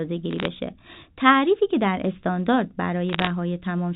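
From 0.31 to 0.45 s and again from 3.09 to 3.30 s, bursts of bit errors on a digital phone line crackle over the speech. A few tenths of a percent of bits flipped, each corrupting one sample, with hits on high bits making a sharp tick. These show as isolated waveform spikes and thin vertical lines spanning the spectrogram up to the G.711 line's 4 kHz ceiling.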